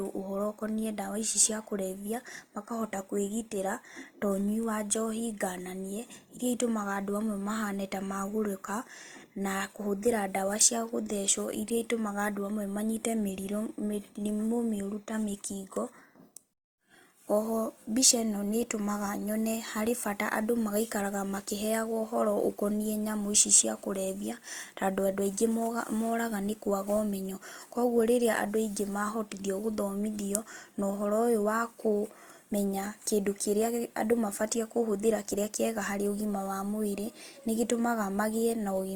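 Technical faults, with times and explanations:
Throughout, Opus compression: speech sounds grainy and rough, likely from a low bitrate near 24 kbps filling sparse bands with noise; spectrogram shows smeared, speckled texture up to about 20 kHz.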